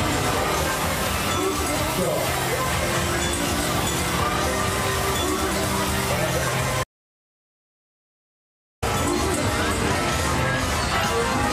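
The audio suffers an audio dropout to silence from 6.84 to 8.82 s, a gap of about 2 s in which the sound stops dead mid-flow and returns abruptly, with no room tone left. The waveform flattens to a straight line, and the spectrogram shows a blank vertical band. The likely cause is a lost input, such as a disconnected device, a failed link or a stray mute, while recording continued to write silence.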